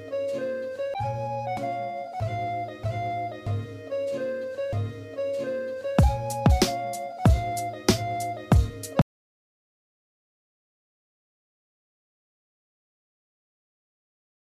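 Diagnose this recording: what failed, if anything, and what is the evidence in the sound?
An audio dropout to silence begins at 9.02 s and runs to the end: the sound stops abruptly and gives way to silence, with no room tone. The waveform flattens to a line and the spectrogram goes blank. The input link, likely a disconnected device or stray mute, failed while writing continued.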